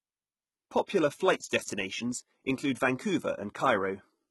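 HE-AAC compression, throughout the speech, is the likely cause of the heavy coding damage. Only the lower spectrum is truly coded, and the treble is rebuilt by copying lower bands upward. Nothing reaches above about 11.8 kHz, which fits a very low bitrate near 16 kbps. The synthetic top end leaves sibilants gritty and lispy.

Pre-echo at 0.86 s is an 18 ms smear before a sharp attack. The codec spread its quantisation noise across the whole transform block, so noise sized for the loud onset leaked into the quiet gap just ahead of it. A brief hiss arrives early and blunts the attack.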